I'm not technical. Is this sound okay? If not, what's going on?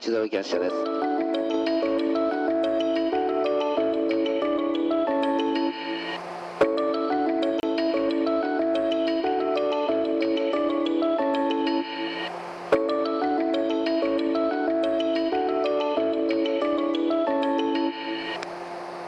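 No. At 7.60 to 7.63 s there is a block of digital silence: for about 30 ms the system produced nothing but zeros instead of the sound. The sound cuts off and returns abruptly, so you hear a brief hole.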